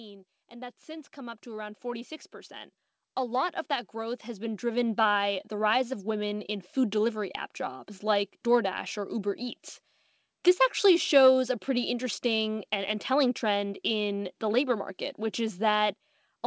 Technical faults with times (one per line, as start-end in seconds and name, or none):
0.49-7.44 automatic gain rising